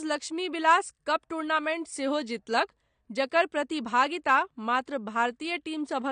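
From start to finish the speech sounds dull and smeared, with nothing above about 9.7 kHz and plainly audible coding damage. The likely cause is AAC compression, consistent with AAC-LC at a low bitrate around 32 kbps. With so few bits available, the encoder discards the top of the spectrum and coarsely quantises what remains, so the air and crispness of the voice are lost and a processed texture runs through the whole clip.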